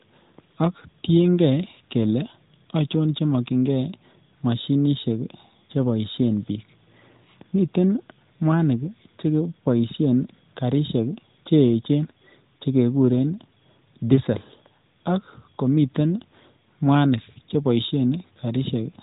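No technical faults can be heard anywhere in the speech. It has passed through the AMR narrowband mobile codec: the sound stops at 4 kHz and has the light coding texture of a high bitrate, which fits AMR-NB's 12.2 kbps mode.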